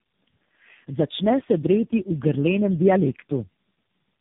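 Tandem speech coding runs through the whole clip: the speech sounds as though it was decoded and re-encoded by several low-rate codecs in a row, which fits four stages such as AMR-NB, G.723.1, G.726 and AMR-NB again, joined by G.711 links. Each coder reshapes the previous one's errors, so the damage compounds. The speech is rough, muffled and warbly, with nothing above 3.7 kHz.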